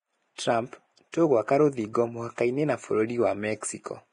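Across the whole speech clip the treble sounds hissy and grainy, with tones roughened and nothing at all above 10.6 kHz. This is heavy Vorbis compression, likely the cause, at a rate that fits roughly 30 kbps. At that rate the encoder lowers its cut-off and quantises the upper bands so coarsely that fine detail is replaced by noise of similar energy, leaving a gritty, brittle texture.

At 0.35 to 0.38 s, 1.12 s and 1.93 s, sharp onsets are each preceded by a brief smear of hiss, about 29 ms long the first time and 16 ms the other two. This is pre-echo. The transform spreads its quantisation noise across a whole block, so noise sized for the loud attack leaks into the quiet moment just before it, softening and blurring each attack.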